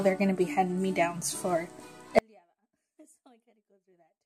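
An audio dropout to a faint residue begins at 2.19 s and lasts to the end of the clip. The sound cuts off abruptly rather than fading, and what remains is a faint trace of the signal roughly 40 dB below its normal level. This is most likely a break in the wanted signal while the path downstream stayed live, so the gap carries a weak leak instead of true silence. A drift correction step runs from 3.00 to 3.58 s, inside that faint stretch. Speed rises by 5.78% and pitch by 97.3 cents, close to a semitone, together, then both snap back. The likely cause is clock-matching software changing the playback rate in a single jump to refill or drain its buffer, so the residue briefly plays sharp and fast before returning to its normal rate.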